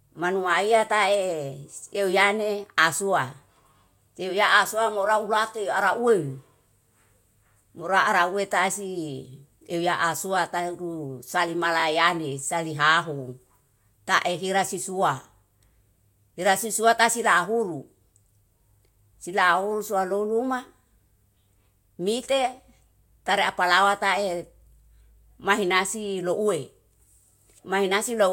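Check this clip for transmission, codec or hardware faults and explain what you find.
One fault is present. Repeated buffer, 11.8 to 11.84 s: fresh audio arrived late, so a roughly 20 ms block played twice more, giving a brief buzzing stutter with hard joins.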